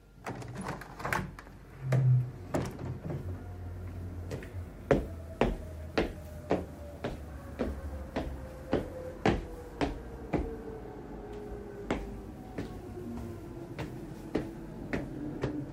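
No technical faults can be heard anywhere in this recording of sounds. Nothing in it stands out as a glitch or a break in the audio.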